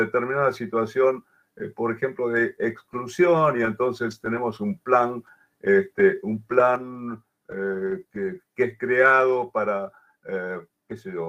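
A truncated block size mismatch runs through the whole clip. A steady buzz at about 46.9 Hz underlies the sound from start to finish, and that repetition rate fits 1024-sample blocks at 48 kHz. One stage hands over longer blocks than the next stage accepts, so the tail of every block is discarded, and each cut leaves a seam that repeats at the block rate. So little is lost per block that playback speed and pitch stay essentially unchanged.

A sudden gain jump occurs at 6.76 s. The level drops by about 5 dB from one sample to the next and stays lower until the end at 11.29 s. The background noise falls together with the sound, which marks it as a digital gain change rather than anything in the source. The likely cause is a gain setting or bit shift applied instantly, without a ramp.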